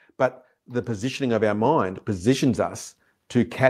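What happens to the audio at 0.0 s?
Nothing goes wrong at 0.0 s; the audio is intact at that moment.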